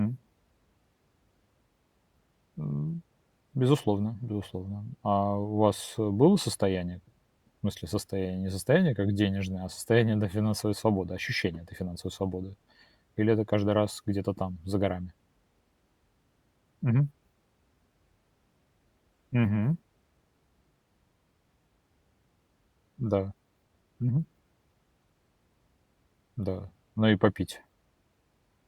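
Listening to this speech recording, nothing stood out as technically wrong at any point.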